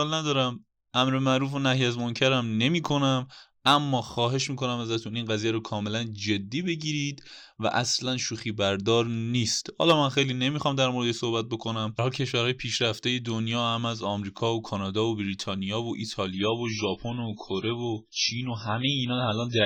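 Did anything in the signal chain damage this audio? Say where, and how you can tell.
Yes. At 16.33 s the speech abruptly loses its top end and stays degraded to the end of the clip, the signature of an adaptive stream at a lower bitrate, a network-stage fault. With no dropout in the waveform, the player switched to a much cheaper encoding, consistent with MP3 falling from around 128 to 16 kbit/s. On a spectrogram, content above 6.6 kHz vanishes in a hard horizontal ceiling, and smeared, warbly coding artefacts thicken below it.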